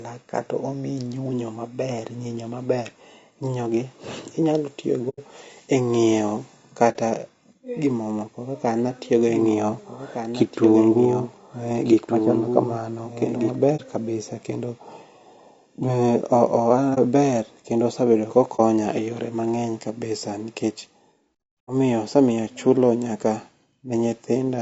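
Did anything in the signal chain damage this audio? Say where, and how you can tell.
Yes, at three points in the chain: the codec, the network carrying it, and a second capture or mixing path.

The codec stage shows low-delay AAC compression across the whole speech clip. The voice is rough and grainy, with noise filling the gaps between harmonics and a thin, synthetic-sounding top band. That is plainly audible damage, and it points to a bitrate around 32 kbps, likely from AAC-ELD. Tape or analogue noise would not behave this way: the grain follows the harmonics rather than sitting as a steady floor.

The network stage shows AAC frame loss with muting. There is a 90 ms hole at 5.09–5.20 s, which fits about three lost frames, and shorter 30 ms holes at 6.92–6.96, 13.76–13.81, 16.94–16.99 and 18.56–18.60 s. Each gap fades out and back in with soft edges, because the decoder zeroed the missing spectrum and the overlapping windows smoothed it. 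A buffer dropout would instead cut off abruptly.

A doubled audio track runs from 9.18 to 13.56 s. A full-band copy about 5 dB quieter trails the original by roughly one and a half seconds, then starts and stops abruptly. It has no decay or room colouring, so it is not acoustic echo or reverb. Most likely the same audio was captured a second time through a slower path and mixed in.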